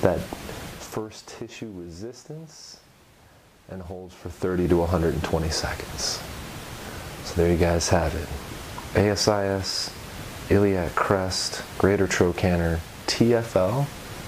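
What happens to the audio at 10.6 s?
At 10.6 s the audio is intact, with no fault to be heard at that moment.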